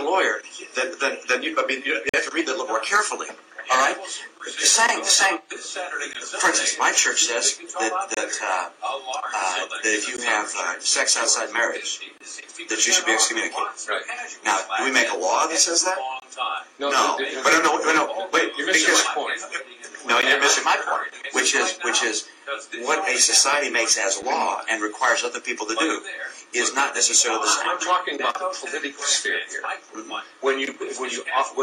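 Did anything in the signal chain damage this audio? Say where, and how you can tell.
Yes. The damage is at the streaming playback stage, as a gap between stream segments. Hard-edged silent holes appear at 2.09–2.14 s, 6.13 s, 8.14–8.17 s, 10.17 s, 12.18–12.20 s, 16.20–16.22 s and 20.22 s, lasting roughly 13 to 44 ms. They fall on a two-second grid, which fits 2-second segments. The timestamps of adjacent segments don't quite meet, so the player pads the difference with silence. The sound resumes intact afterwards, with nothing lost.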